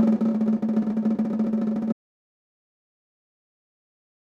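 At 1.93 s the music stops abruptly in mid-flow and never returns; from there to the end of the clip at about 4.4 s there is complete silence, with no room tone or residual noise underneath. This is an audio dropout to silence. The likely cause is a lost input, such as a disconnected device, a failed link or an accidental mute, while recording carried on writing silence, so whatever played after that point is gone.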